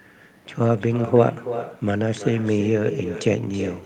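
From start to finish the speech carries echo with no canceller: the far end is playing the call over a loudspeaker, its microphone picks it up, and nothing subtracts it, so every phrase returns after a delay of roughly a third of a second, about 10 dB quieter and thinner. On a spectrogram each burst of energy has a fainter, duller twin offset to the right; the waveform shows smaller repeated envelopes trailing each syllable.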